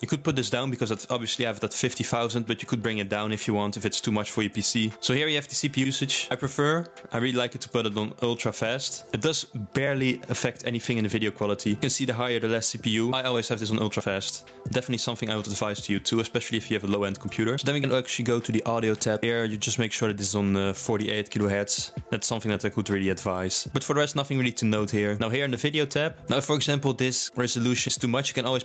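Gain pumping runs through the whole clip, most likely from input gain set far too high with a fast limiter clamping each loud sound, so the gain ducks by roughly 15 dB under peaks. The sound stops near 8 kHz, which fits a call codec at about 40 kbps.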